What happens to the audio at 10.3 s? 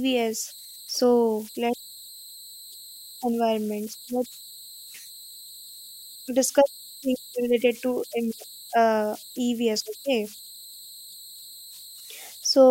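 Converter idle tones are present at 10.3 s, as they are throughout the speech. The delta-sigma converter is running without dither, so when the input is small its modulator settles into repeating bit patterns, and those patterns produce tones whose pitch follows the input's offset. Here that comes through as a whistle around 4 kHz in the pauses and a grainy texture under quiet passages, sitting about 22 dB below the speech.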